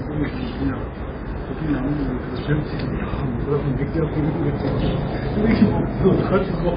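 Throughout, the sound has heavy MP3 compression artefacts: watery, swirly texture, smeared attacks, nothing above 5 kHz, likely from a very low bitrate around 16 kbps.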